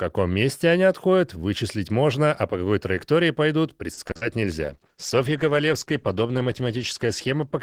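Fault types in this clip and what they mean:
Repeated packet loss (robotic sound): Right after "по какой траектории пойдут", around 3.93–4.23 s, several short gaps get patched by stretching earlier sound, so it turns choppy and robotic.
Call bitrate drop: From 4.63 s to the end the encoder starves, with a roughness that points to a fall from about 32 to 13 kbps, making the sound coarse and muffled.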